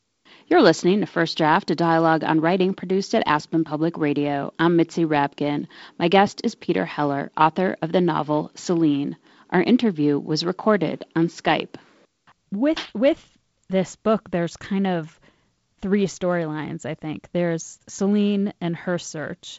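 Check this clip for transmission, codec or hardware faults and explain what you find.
No transmission, codec or hardware faults turn up in this clip.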